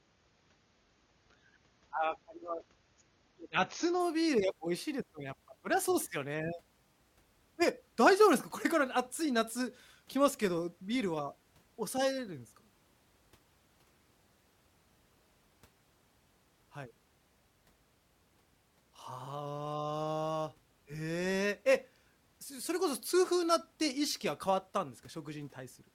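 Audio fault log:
0.0–4.0 s, adaptive stream starting at a low bitrate: the player opened on a lean encoding, fitting roughly 24 kbit/s, so the speech has nothing above 6.9 kHz until quality jumps up with no gap.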